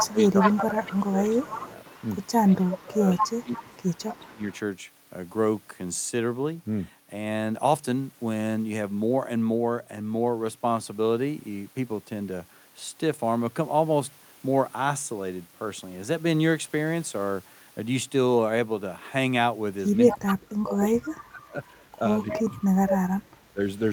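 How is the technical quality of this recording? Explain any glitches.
The recording has two recurring call-processing problems, clustered in the first 5 seconds and again near the end.

Echo leak, 0.0–2.4 s, 2.76–4.59 s, 19.92–20.35 s and 22.31–22.36 s: a loudspeaker-side echo canceller likely failed to remove all of what its microphone picked up, so the speech returns as a faint copy trailing by 218 ms, roughly 10 to 15 dB quieter.

Speech suppressed in double talk, 0.06–1.57 s, 2.45–3.69 s, 4.11–4.42 s and 20.11–23.61 s: with both sides talking, the canceller likely could not separate the talker from echo and turned both down. The speech dips by roughly 10 to 25 dB, deepest in the last stretch.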